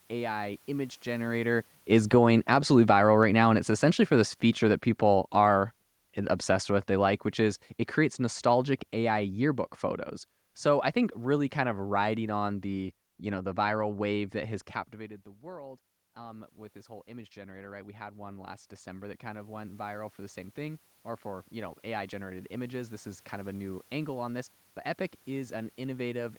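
Right at the start, around 1 s, the talker gets closer to the mic, and the automatic gain control reacts as automatic gain falling. From 1.18 to 5.65 s it eases the level down by about 9 dB, so the speech starts hot and then sinks, with the room noise dropping along with it. It then takes a second, smaller bite from 6.48 to 9.68 s, about 3 dB more, which you hear as a slight further settling.

Then it goes the other way. Around 14.5 s, just after "viral wave that has", the talker backs off and the input drops by about 18 dB. From 14.96 to 24.57 s you get automatic gain rising: the control slowly brings the level up by about 14 dB over nearly ten seconds. The voice and the room noise swell back together, and they never quite get back to where they were.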